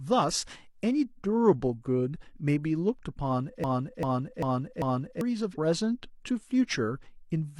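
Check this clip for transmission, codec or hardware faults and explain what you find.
There is one fault, a broken-record loop in the speech from 3.64 to 5.21 s. A single 0.39 s fragment plays four times back to back, a stuttering repeat where fresh audio should be. The likely cause is a stalled player, encoder or stream resending the last fragment it held, so the intended audio for that span is lost.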